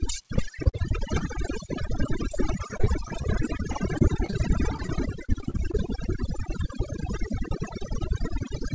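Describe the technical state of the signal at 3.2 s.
At 3.2 s the signal sits inside a stretch of repeated packet loss (robotic sound) running from 2.32 to 5.75 s. Audio data is dropping out again and again, and each hole is bridged by extending the last received sound. The short dropouts, none longer than about 33 ms and together roughly a tenth of the span, recur closely enough to chop the speech into a clipped, robotic texture with fragments missing.

Overdone noise removal is also active at that moment, as it is across the whole clip. The suppressor is cutting individual frequency bands deeply whenever they look like noise, and it takes the softer parts of the speech with them. The background collapses to near silence dotted with twinkling specks. All of this sits within the G.722 call path's band, which has nothing above 8 kHz.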